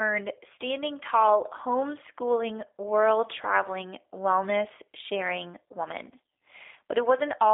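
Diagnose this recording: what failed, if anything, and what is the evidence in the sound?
Codec stage: G.729 codec damage throughout, with rough, synthetic speech and nothing above 3.7 kHz. That's a low-rate pulse-excited model, which fits 8 kbit/s.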